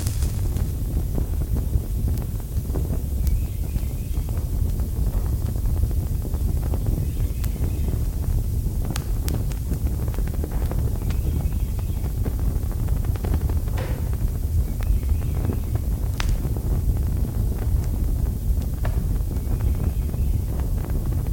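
No technical faults are audible.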